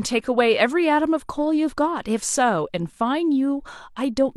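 Nothing in the speech stood out as a technical fault on listening.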